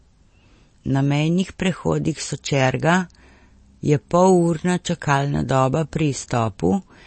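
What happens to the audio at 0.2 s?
At 0.2 s the speech sounds dull and watery, with swirly, chirping s sounds and nothing above 8.4 kHz, as it does throughout the clip. This is likely MP3 compression at a starved bitrate, around 32 kbps, cutting the treble and dropping weak frequency lines frame by frame.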